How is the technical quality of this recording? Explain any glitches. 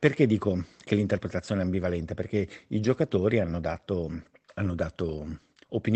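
No glitches turn up anywhere in the recording. The speech has passed through a call codec, and its top end stops at about 8 kHz, as expected for that kind of path.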